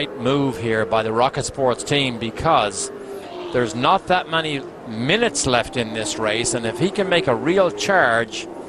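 No technical faults can be heard anywhere in this recording.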